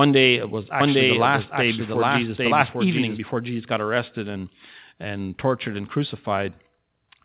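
From 0.81 s to 3.19 s, just after "day it was", a doubled audio track appears. A full-band copy of the speech trails the original by roughly 0.7 s, at about the same level. It is likely a second capture path or a misaligned edit. The copy is dry, with no room colour, and starts and stops abruptly. Both copies are limited to 4 kHz by the phone-band call path.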